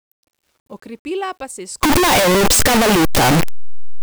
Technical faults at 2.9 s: signed and unsigned mixed up

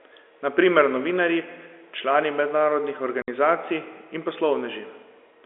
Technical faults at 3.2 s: packet loss filled with silence

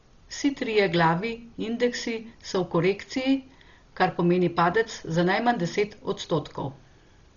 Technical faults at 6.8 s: Dolby Digital compression

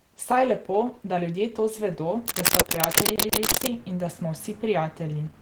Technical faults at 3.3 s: Opus compression; cable scratch noise; CD stuck on one turn

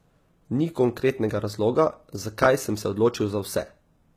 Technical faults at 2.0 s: HE-AAC compression

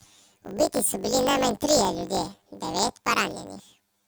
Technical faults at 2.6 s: planar audio read as interleaved

